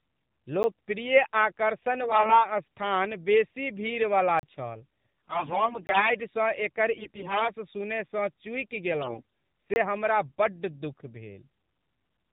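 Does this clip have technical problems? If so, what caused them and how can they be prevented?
Yes, there are three separate problems here.

The whole clip goes through the AMR narrowband mobile codec at 7.4 kbps. Nothing above 4 kHz survives, and the low bitrate gives the speech a plainly buzzy, synthetic edge. To avoid this, use a higher AMR mode or a wideband codec such as AMR-WB if the network supports it.

There are four blocks of digital silence, each a hard cut with no fade. The first is a 10 ms tick at 0.63 s. The second is a 36 ms hole from 4.39 to 4.43 s, right after "स्थान बेसी भीड़वला". The others run from 5.87 to 5.89 s (20 ms) and from 9.74 to 9.76 s (about 23 ms). This is most likely the output buffer not being filled in time, so a larger buffer or a higher-priority audio thread should stop it.

There are also four bursts of AMR bit errors, where flipped bits knock the excitation pulses and finer parameters off and the speech turns hoarse and gargly. 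The first runs from 2.03 to 2.47 s, just before "स्थान बेसी भीड़वला छल", at about a 7 percent error rate. The second runs from 5.28 to 6.11 s, just after that same phrase, at roughly 15 percent, and it's the longest. The last two run from 6.92 to 7.50 s at about 10 percent and from 9.02 to 9.22 s at about 15 percent. A stronger radio link or more robust channel coding would keep these from getting through.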